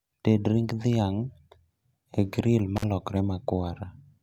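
At 2.76 s the speech cuts out for about 46 ms, ending by 2.84 s, in an intermittent contact fault: a loose plug or cable briefly opens the line. Crackle at both edges and faint hiss in the gap set it apart from a clean digital dropout.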